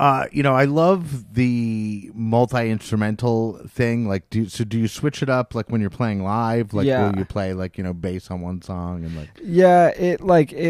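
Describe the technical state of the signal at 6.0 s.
The signal at 6.0 s is intact, with no audible fault at that moment.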